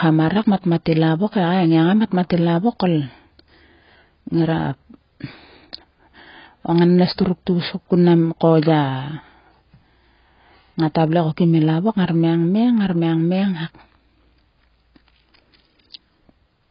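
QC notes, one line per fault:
Throughout: AAC compression, likely at a low bitrate, removes everything above 5.3 kHz, so the speech sounds heavily dulled, smeared and warbling across the clip.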